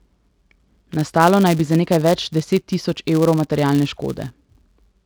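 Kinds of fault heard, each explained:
Filter restarted on every block: a steady buzz at about 172 Hz runs through the speech from start to finish. It rises and falls with the loudness of the speech and drops back in the quieter gaps. The cause is a filter that loses its memory at each block boundary and restarts from silence, so every block opens with a small transient. Those clicks repeat at the block rate, which fits a 256-sample block.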